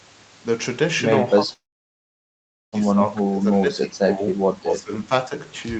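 From 1.39 s to 4.38 s the speech keeps sinking in level. At its deepest it falls roughly 15 dB, and about a second of it is affected in all. This is speech suppressed in double talk. The likely cause is the echo canceller confusing this talker with loudspeaker echo while the far side was also speaking. It turned both down. The voice dips and thins in patches rather than fading smoothly.

Inside that stretch, from 1.53 s to 2.75 s, comes a call audio freeze. Packets stalled and the jitter buffer likely ran dry. The receiver filled 1.19 s, and almost all of it, about 1.14 s, is silence. When the audio resumes, it carries on exactly where it stopped. Nothing is lost, but everything after runs 1.19 s late.

From 4.61 s to 5.11 s the speech is suppressed in double talk again. The drop is milder, roughly 10 dB, over about 0.4 s. The words duck briefly, then recover.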